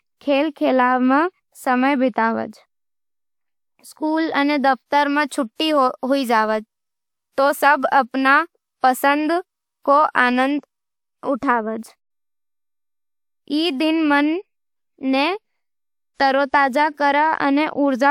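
A speech recording with nothing technically wrong with it.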